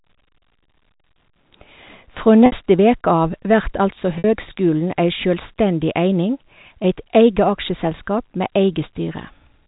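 Packet loss with pitch repetition occurs twice, at 2.46 to 2.52 s and at 4.18 to 4.24 s. Each time 60 ms of audio went missing, which fits three 20 ms packets. The receiver looped the last pitch period, so the speech holds on a buzzy tone, fades toward silence, and cross-fades back.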